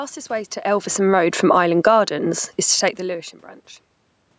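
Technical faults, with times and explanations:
0.67–2.03 s, automatic gain falling: Just after "way to", the sound starts loud and then sinks by about 11 dB over more than a second, with the room background dropping in step. The automatic gain control judged the input too loud and pulled its gain down gradually rather than at once, so both speech and room noise fade together. Combined with the talker shifting position near 0.5 s, the loudness wanders here.
1.94–2.41 s, automatic gain rising: Heading into "is to", the level swells back up by about 7 dB, background included, over roughly half a second. The input had fallen by about 24 dB, so the gain control judged it too quiet and raised its gain step by step. That produces a pumping where the room noise rises along with the speech. The talker's movement around 2.5 s adds a further level change just after.
2.88 s, electrical switching spike: Right after "is to", a sharp snap lasting a few milliseconds sits on top of the speech. 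It is clearly added rather than part of the talker's sound, since it is abrupt and unrelated to the words around it. This is likely a nearby switch, motor or static discharge arcing briefly, with the audio line picking up the burst of electrical interference.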